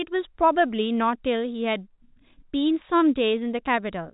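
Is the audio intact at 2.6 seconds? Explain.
Yes, at 2.6 seconds the speech runs on without any fault, carried in ordinary G.711 telephone coding whose band stops near 3.8 kHz.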